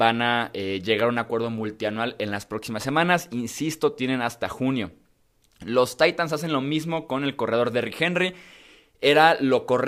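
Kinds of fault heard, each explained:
Crude rate conversion: linear interpolation without filtering, consistent with 44.1 kHz to 48 kHz, leaves an inharmonic fizz around 40 dB below the speech, following loud, bright sounds.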